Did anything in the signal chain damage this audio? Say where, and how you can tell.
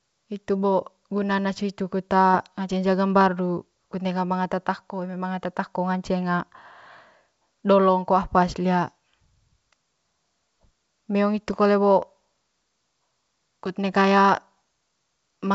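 No damage found in chain.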